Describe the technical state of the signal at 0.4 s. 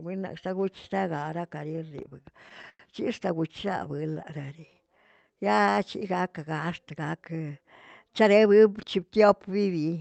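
At 0.4 s the speech is intact, with nothing beyond the ordinary character of the call path it came through.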